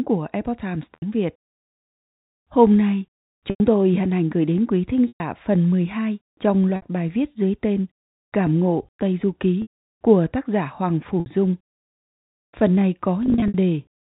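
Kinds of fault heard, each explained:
Packet loss with pitch repetition: lost speech chunks, up to 120 ms each, are bridged by a repeated pitch period, giving brief buzzy held tones that fade into silence on the longer gaps, rather than clicks or abrupt dropouts.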